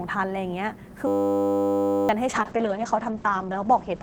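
From 1.07 to 2.09 s a system hang loop occurs: the host stalled while the audio hardware kept replaying the same 10 ms of its ring buffer, about a hundred times over. The result is a steady 100 Hz buzz in place of roughly a second of speech.

At 2.28 s a call bitrate drop sets in and lasts to the end. The encoder coarsens and the top end is cut from 20 kHz to 8 kHz, which fits a fall from 32 to 9 kbps. Speech turns muffled and rough, bottoming out for 1.53 s.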